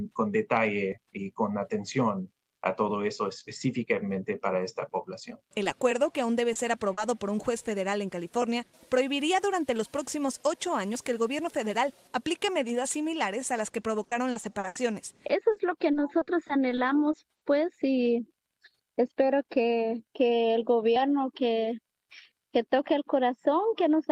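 Audio arriving over a packet network lost short runs of data, and the receiver had to invent sound to cover the holes, which shows up as short concealed packet loss in three places: 5.63 to 5.67 s, 6.53 to 6.57 s and 6.93 to 6.99 s. The first two gaps are about 20 ms of missing audio each and the third about 40 ms. In each, the decoder carried the preceding sound forward and then eased back into the real signal, leaving a brief smear or wobble where a short detail can drop out. Later the losses became frequent enough to produce repeated packet loss (robotic sound). From 14.03 to 14.77 s six gaps, the longest about 80 ms, were patched with 220 ms of synthesized audio, close to a third of that stretch. From 15.27 to 17.43 s ten more gaps, up to 60 ms each, added 280 ms of fill, about an eighth of the span. With one extrapolated patch following soon after another, both passages turn choppy, with pieces missing.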